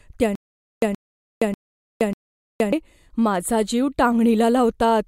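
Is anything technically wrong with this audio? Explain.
Yes. From 0.35 to 2.73 s there is a stutter with silent gaps. A 124 ms fragment of the speech plays, then about 469 ms of dead digital silence follows. The same fragment returns four times at an even period of about 593 ms. This is likely a stalled player or stream that replays its last buffered fragment at each retry, then runs dry. The speech that belonged in those gaps is gone and does not come back.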